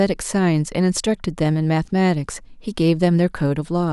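No technical faults are audible.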